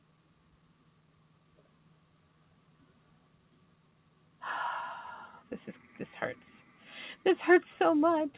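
A noise suppressor designed for speech has been left running on this non-speech audio. It treats sustained tones, ambience and decay as noise and pulls them down, so the level pumps up and down by around 10 dB across the clip. Attacks pass through while anything held sinks. On a waveform, the envelope ducks shortly after each onset instead of holding steady. On a spectrogram, sustained partials fade or flicker rather than running as continuous lines.

The sound cut by the noise suppressor is clearest from 0.01 to 4.42 s. There, steady or fading material is turned down by as much as about 11 dB, and tails are cut short instead of decaying naturally. A shorter dip of about 8 dB follows between 6.63 and 6.87 s. Both show as hollowed-out stretches in the waveform and as dimmed, truncated energy on the spectrogram. The call path's G.711 A-law coding leaves a flat ceiling with nothing above 4 kHz.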